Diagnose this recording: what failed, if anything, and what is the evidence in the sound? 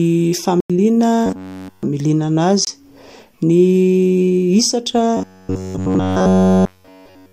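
The speech drops out abruptly twice, with no fade: a 93 ms hole from 0.60 to 0.70 s and a 23 ms gap at 2.65 s. These are blocks of digital silence at the driver or buffer stage. The output buffer went unfilled and zeros were played instead. The lengths fit a 4096-sample block and then a 1024-sample block, so whole buffers were lost at once.

From 1.26 to 1.83 s, and again from 5.17 s to the end of the clip, the speech turns into a rigid, metallic buzz that still loosely follows the syllables. This is robotic sound from repeated short buffers, likely caused by audio arriving too seldom at the buffer stage. The software loops the last fragment of roughly 10.7 ms and skips essentially all the real audio, which imposes a fixed 93.8 Hz buzz on the sound.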